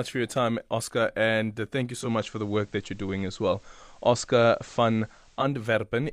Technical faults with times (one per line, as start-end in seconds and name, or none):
1.97-5.47 digital radio blending to analogue